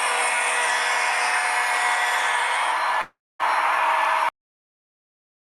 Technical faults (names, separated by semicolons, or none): long network dropout; cut-off end